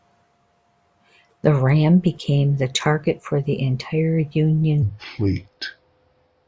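Wrong sample rate from 4.82 s to the end: speech slows to 0.73 times speed and drops 5.55 semitones, which fits 22 kHz audio played at 16 kHz.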